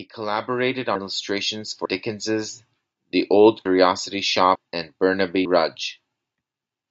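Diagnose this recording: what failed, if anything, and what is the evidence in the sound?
Automatic gain rising, in the call processing stage. From 0.16 s to 3.27 s, the speech and the background swell together by about 10 dB. The automatic gain control judged the input too quiet. It then raised its gain gradually, not in one step.

Audio missing between chunks, at the driver or buffer stage. Short skips occur at 1.85, 3.65 and 4.55 s. Each drops roughly a tenth of a second, and the two sides are joined with no gap. The likely cause is a recorder working in 1 s chunks that loses audio at each handover.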